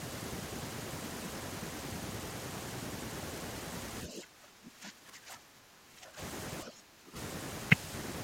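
From 4.06 to 6.20 s the speech sinks by roughly 15 dB, and from 6.63 to 7.17 s by nearer 20 dB, thinning and breaking up. This is speech suppressed in double talk, likely an echo canceller turning down the near talker while mistaking it for loudspeaker echo.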